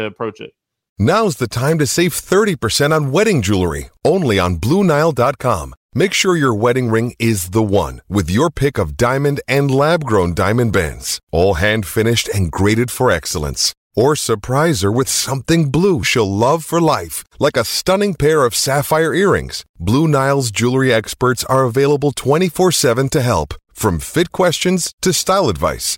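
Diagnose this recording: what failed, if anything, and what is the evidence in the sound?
Nothing in this speech recording points to a failure at any stage, and there's no audible evidence of a fault to diagnose.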